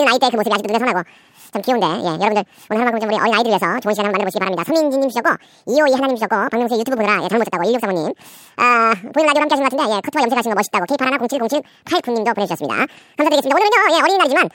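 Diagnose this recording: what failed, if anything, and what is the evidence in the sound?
The fault sits at the sample-format conversion stage: the audio was read two samples at a time (double speed) for the whole clip. The reader treated each pair of samples as one frame, as if the data were two channels or samples twice as wide, so the speech plays at 2x speed and a full octave (12 semitones) high. On a spectrogram, harmonics and formant bands sit at twice their usual frequencies and syllables are squeezed to half their length. On the waveform, the syllable envelopes are packed twice as densely.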